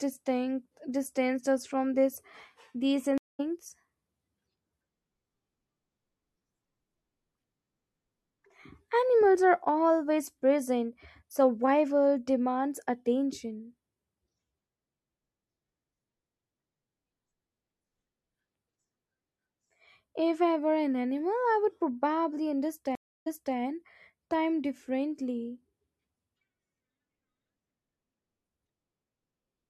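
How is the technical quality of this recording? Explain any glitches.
The speech is interrupted twice by stream reconnects. At 3.18 to 3.40 s there's a gap of about 0.21 s, then the audio picks up roughly a third of a second later. At 22.95 to 23.56 s a 0.31 s silence is followed by audio that jumps back 0.3 s, so a bit repeats. Both times the connection dropped and the player restarted decoding mid-stream.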